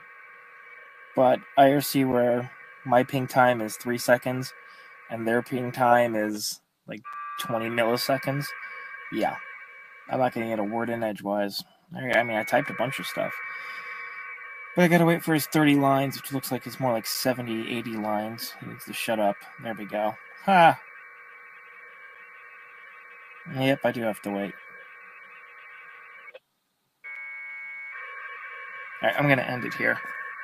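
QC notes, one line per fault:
Throughout: noise suppressor applied to music or sounds. A speech-oriented suppressor stays active and treats sustained tones, ambience and decays as noise, so level swings of around 10 dB follow the material. Onsets pass while held content sinks, giving a pumping, thinning character.
0.00–1.57 s, 2.48–2.86 s, 4.50–5.52 s, 9.57–10.10 s, 11.64–11.89 s, 14.37–14.76 s, 18.51–23.50 s, 24.15–26.40 s: sound cut by the noise suppressor. Steady passages are pulled down, by about 10 dB at deepest in most spans, about 9 dB at 11.64 s and about 6 dB at 14.37 s. Tails shorten audibly, with the longest dip near 18.5–23.5 s.
2.12 s, 7.13 s, 12.13 s, 17.14 s, 27.16 s: gap between chunks. A hard-edged hole of about 7 ms appears at the joins, spaced 5 s apart, which fits chunked delivery with padding or late playback start. Nothing is lost, but continuity breaks briefly at each point.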